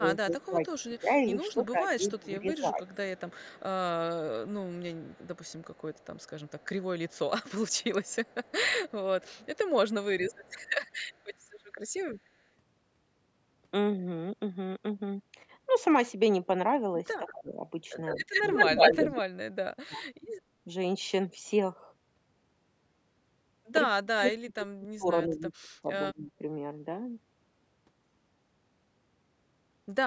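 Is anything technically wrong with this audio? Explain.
Yes. From 0 to 2.83 s, 17.19 to 20.69 s and 23.96 to 26.43 s the speech is suppressed in double talk. It dips, about 15 dB at first and about 35 dB later, for roughly two, one and one and a half seconds in total. The likely cause is an echo canceller muting both talkers when both sides speak at once.

Echo leak comes in three stretches: 0.79 to 1.53 s, 2.86 to 11.25 s, and 17.29 to 19.08 s. A delayed copy of the voice follows it, 202 ms late and about 30 dB down in the first two. In the third it trails by 156 ms and sits about 5 dB above the speech. The likely cause is a loudspeaker echo that the far end's canceller failed to remove.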